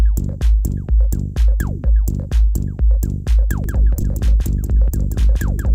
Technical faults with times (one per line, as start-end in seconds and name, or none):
3.64-5.74 doubled audio track
4.01 lost LE Audio frames